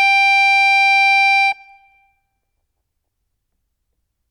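The music runs without any audible dropout, distortion, glitch or other technical disturbance anywhere in the clip.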